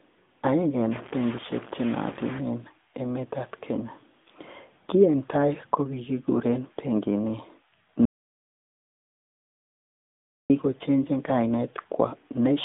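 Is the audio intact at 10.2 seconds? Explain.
No. An audio dropout to silence runs from 8.05 s to 10.50 s, so 10.2 s falls inside a gap of about 2.4 s of silence with no room tone at all. The input was likely lost for that stretch, through a disconnect, link failure or accidental mute, while recording carried on writing silence. The speech stops abruptly mid-flow and resumes just as suddenly, and whatever was said during the gap is gone.

The AMR narrowband mobile codec also affects the audio at this point, as it does throughout. AMR-NB samples at 8 kHz and rebuilds the voice from a vocal-tract model driven by a few pulses per 5 ms subframe. Nothing above about 3.8 kHz survives, and the usable band runs from about 200 Hz to 3.6 kHz. The buzzy, synthetic quality is plainly audible and fits a 10.2 kbps mode.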